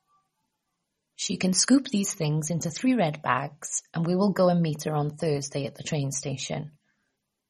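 Speech, carried throughout by what is likely MP3 compression at a low bitrate, in the region of 32 kbps. Starved of bits, the encoder has cut the treble off at 13 kHz and dropped the weaker frequency lines, which then flicker in and out from one frame to the next. The codec damage is plainly audible across the whole clip: a watery, swirling texture in the speech, metallic chirps on s sounds, and consonant attacks smeared rather than crisp.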